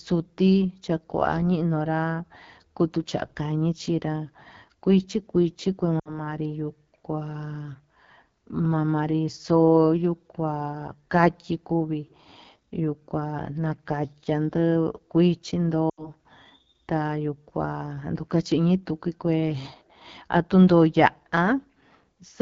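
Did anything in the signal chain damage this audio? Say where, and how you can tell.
Yes. At the codec stage, the whole clip carries AMR wideband (HD Voice) codec damage. The speech is plainly rough and raspy, as the low-rate modes produce, which fits 8.85 kbit/s. It differs from narrowband coding because there is still content up to 7 kHz, with noise-like fill above 6.4 kHz.

At the network or radio stage there are lost AMR speech frames at 5.99–6.21 s and 15.89–16.12 s. The speech smears and fades rather than cutting off hard, because the decoder repeats the last good parameters with falling gain. The gaps fit three and four 20 ms frames.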